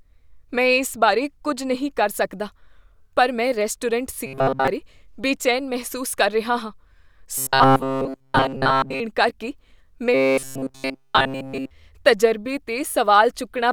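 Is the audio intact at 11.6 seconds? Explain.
No. At 11.6 seconds the speech falls within a stretch of robotic sound from repeated short buffers, running from 10.14 to 11.71 s. The likely cause is audio reaching the playback side too rarely, so the software fills each gap by looping the most recent fragment, about 7.5 ms long, while essentially all of the real signal is dropped. That loop imposes a fixed 134 Hz buzz, leaving a rigid, metallic tone that only loosely tracks the speech.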